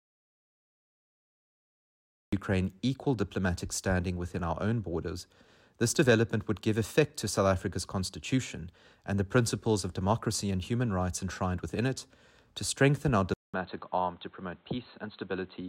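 From the very start to 2.33 s the clip is silent, an audio dropout to silence already in progress when the file begins. There is no room tone or hiss in this stretch. The input was likely lost upstream while recording continued, so whatever sounded during those first seconds is absent, and the audio enters abruptly at 2.33 s.

At 13.34 s the input switched to a poorer device, which is likely a change of microphone or a move to a headset call profile. A gap of about 200 ms of silence marks the switch. After it the audio runs to the end with nothing above 4.2 kHz, so it sounds dull and boxy. The level drops by roughly 5 dB, and a new background noise sits roughly 35 dB below the signal.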